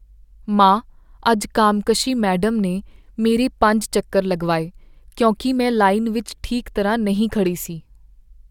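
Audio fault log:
No faults were found in this speech recording. Nothing in it called for a log entry.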